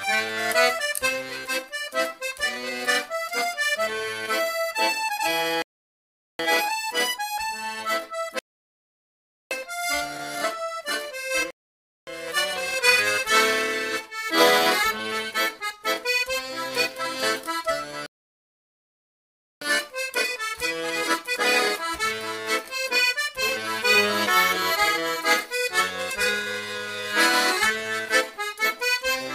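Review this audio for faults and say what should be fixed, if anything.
The player's download buffer ran dry four times, causing rebuffering stalls: playback halts into silence at 5.62, 8.39, 11.51 and 18.06 s, pausing about 0.77, 1.12, 0.57 and 1.55 s, then resumes exactly where it stopped, adding time without losing audio. A larger startup buffer and lower-bitrate adaptive switching would prevent it.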